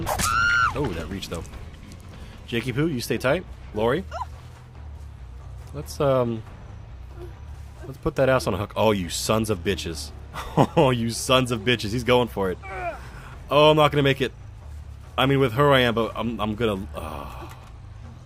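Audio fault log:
No faults detected on this pass; nothing to log.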